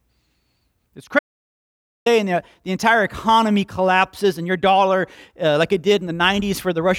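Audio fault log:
1.19–2.06 s, audio dropout to silence: speech stops dead for about 0.87 s, silence with no room tone, likely a lost input, resuming at "the the entire economy".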